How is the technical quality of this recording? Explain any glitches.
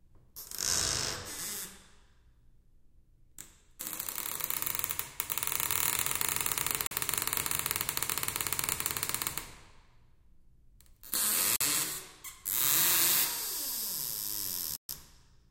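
The recording has three glitches, all blocks of digital silence. At 6.87 s and 11.56 s, about 43 ms drops to silence, which fits a missed 2048-sample output buffer. At 14.76 s a 128 ms hole opens. Each gap starts and ends abruptly.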